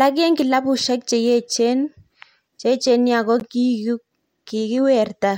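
Speech, with one corrupt frame decoded from 3.40 to 3.43 s. A single damaged compressed frame, its bits flipped, was played rather than concealed, so misread gains and codes put energy at the wrong frequencies. It is heard as a short chirp, squeak, blip or burst of noise peaking at about -20 dBFS.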